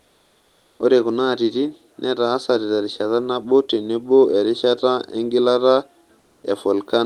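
Discontinuous transmission likely stopped sending audio during pauses, so comfort noise in place of the background fills 0.0–0.79 s and 6.19–6.43 s, after "nabo tenebo erishata engilata". Each gap becomes a steady, featureless hiss about 3 dB quieter.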